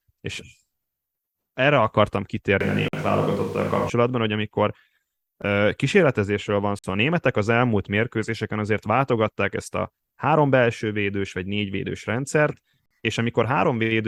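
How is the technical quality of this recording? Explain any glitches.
The recording has two kinds of glitch: a brief stretch where the speech suddenly sounds far away, and three short dropouts to silence.

From 2.61 to 3.90 s, between "erre akartam" and "hogy amikor", the speech turns hollow and roomy, loses low end, and picks up background noise roughly 25 dB below it, though the level barely shifts. This is likely a switch to a distant microphone: the close mic's signal dropped out, and a farther pickup filled the gap before the close sound returned abruptly.

At 2.88 s, 6.79 s (after "uh kísérletezésről van") and 12.86 s (after "vagy négy védős rendszert"), the sound cuts to silence for about 50 ms, then resumes. Each is likely a Bluetooth stall: interference delayed packets, the headphone buffer emptied, and playback paused until data arrived.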